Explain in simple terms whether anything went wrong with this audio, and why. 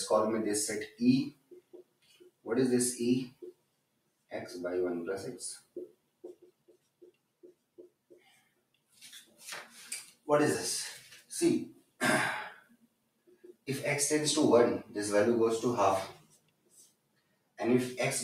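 A noise suppressor meant for speech was left running on audio that isn't speech, so it keeps mistaking steady tones and lingering tails for background hiss. Throughout the clip the level pumps and thins. Unlike a plain volume drop, sudden hits mostly still come through.

The clearest moments of sound cut by the noise suppressor are at 0.87–2.47 s, 3.29–4.32 s, 5.59–10.27 s, 11.0–11.32 s, 11.72–12.01 s, 12.55–13.68 s and 16.14–17.59 s. In these spots, held or fading sound sinks sharply or stops short. The longest is around 5.6 to 10.3 s.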